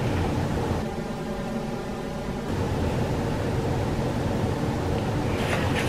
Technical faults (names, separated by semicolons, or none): channel delay (comb filtering)